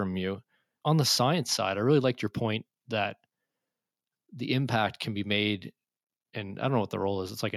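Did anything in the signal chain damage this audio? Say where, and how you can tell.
No, nothing along the way seems to have harmed this speech recording, and there's no stage I could point to as having left a mark on it.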